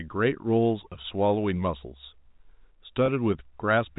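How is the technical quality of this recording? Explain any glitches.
Two short dropouts in the telephone-band speech. G.711 coding removes everything above 4 kHz, as expected. Packet loss with pitch repetition at 1.02 to 1.04 s and 3.06 to 3.08 s: each gap matches one lost 20 ms packet, patched by repeating the last pitch period, giving a brief held, buzzy blip.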